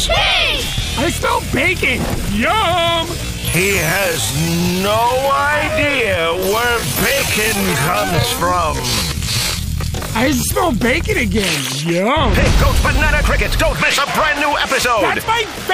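From 3.15 to 10.49 s a time-stretched section plays at about half speed, 0.51x, pitch unchanged, sounding dragged; likely software padding repeated short pieces.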